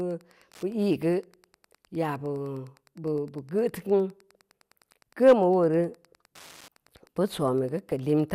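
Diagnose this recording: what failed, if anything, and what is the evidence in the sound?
A steady ticking runs under the speech from start to finish, about ten clicks a second, sitting roughly 35 dB below the speech. The clicks recur every 102.4 ms, which is the signature of Wi-Fi interference. The failure is in the analogue wiring. A nearby Wi-Fi radio's beacon transmissions are being picked up and rectified by the audio circuit, so each beacon becomes an audible tick in the signal.

At 7.92 s there is a brief burst of burbling over the speech, gone almost as soon as it starts. That is DAB burbling, a failure at the codec stage under weak reception. A small fraction of a percent of bits arrived wrong and slipped past error correction into the MP2 audio data. The corrupted samples put short blips of noise into individual sub-bands for a moment, producing that burbling.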